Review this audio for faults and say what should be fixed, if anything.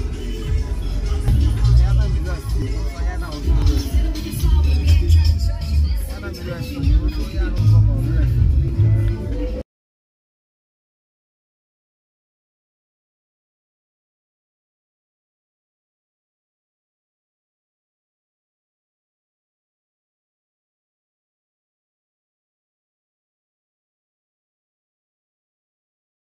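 There are short jumps at 1.28, 2.62, 3.62, 7.58 and 8.68 s. Each is a sudden skip forward. No gap of silence is left. About 20 ms of sound is missing each time, and the two sides meet directly. This is likely a dropped buffer (overrun). The capture program fell behind, and the hardware wrote over samples before they were read. To prevent it, use a larger capture buffer or give the recording thread higher priority.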